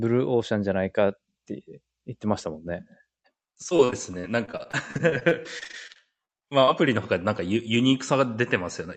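Between 3.69 s and 6.69 s of this speech clip, packets on the call path were repeatedly lost or arrived too late, with close to thirty separate holes, the longest 42 ms. Each hole was patched by extending the preceding sound. Those patches fill roughly a fifth of the stretch, so this repeated packet loss gives a choppy, robotic texture with small pieces of speech missing, heard through a call codec whose content stops near 8 kHz.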